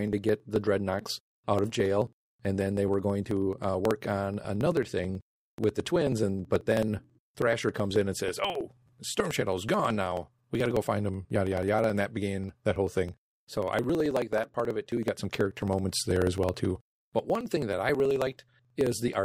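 A speech recording with periodic USB or driver dropouts running from 0.08 s to 19.19 s: every 54 ms, about 18 times a second, roughly 10 ms of audio is skipped outright rather than replaced by silence, so hundreds of small splices produce a steady ticking that rides on the speech and vanishes in pauses. The strict, unchanging spacing separates this from network packet loss, whose gaps fall irregularly, and points to a background task periodically stalling the bus or driver.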